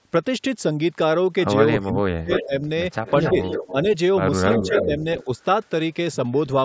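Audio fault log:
1.81–2.3 s, 2.46–2.68 s, 4.62–5.06 s, 5.24–5.39 s: speech suppressed in double talk. The talker ducks hard, roughly 40 dB at first and milder later, likely from the echo canceller turning down overlapping speech.
2.3–2.46 s, 3.06–3.72 s, 4.5–4.86 s, 5.2–5.24 s: echo leak. A copy trailing by 272 ms slips back through, sometimes nearly as loud as the talker and once just a faint scrap, likely loudspeaker pickup the canceller missed.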